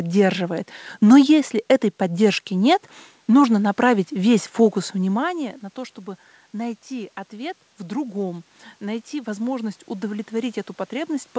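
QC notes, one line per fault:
6.51–11.39 s, automatic gain rising: after "внимания на то чтобы" the input had dropped about 14 dB, so the gain control climbs slowly, swelling speech and room noise together. The waveform envelope grows steadily, and the spectrogram's noise floor brightens with the speech.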